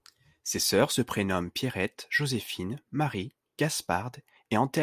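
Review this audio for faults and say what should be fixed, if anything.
No faults; nothing needs fixing.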